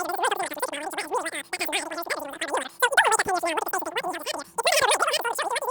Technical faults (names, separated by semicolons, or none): wrong sample rate